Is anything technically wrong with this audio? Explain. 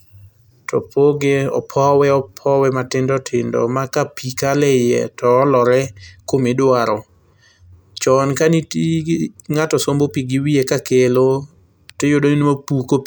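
No, nothing technically wrong can be heard in this speech recording.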